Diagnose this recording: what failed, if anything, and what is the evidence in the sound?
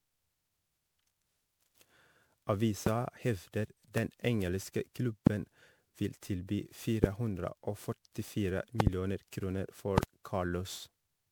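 Codec stage: the speech sounds swirly, hollow and smeared throughout, with blurred attacks. This is generation loss, likely from about ten MP3 re-encodes at 128 kbit/s.

Analogue wiring: loud pops, about 15 to 25 dB above the speech, at 2.87–2.89, 3.98–4.00, 5.27–5.29, 7.04–7.06 s, and double pops at 8.80–8.89 and 9.98–10.05 s. These are likely electrical transients.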